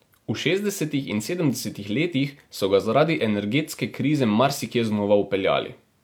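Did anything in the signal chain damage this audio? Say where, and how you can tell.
No, nothing in this speech recording points to damage anywhere along the signal chain, so there's no stage to single out.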